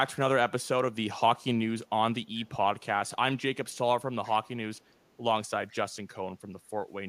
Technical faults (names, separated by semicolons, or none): echo leak